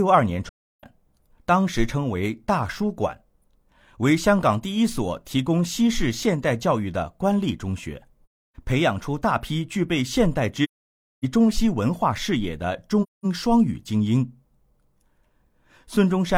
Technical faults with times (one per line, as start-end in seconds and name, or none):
0.49-0.84 AAC frame loss with muting
8.28-8.56 AAC frame loss with muting
10.63-11.25 AAC frame loss with muting
13.02-13.25 AAC frame loss with muting